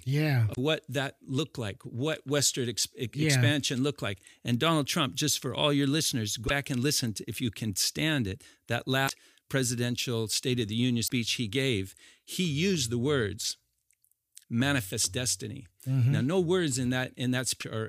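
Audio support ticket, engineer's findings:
Brief chirp, squawk, click or short-hole blips in the speech, each about 60 ms: 0.51–0.58 s (before "what that looked like"), 6.44–6.51 s (between "for all your listeners" and "and listen to if"), 9.05–9.11 s, 11.04–11.10 s (before "he gave he used"), 17.57–17.63 s. Damaged data in a compressed stream. Decoder misreads corrupt frames, loses sync, resyncs at next header.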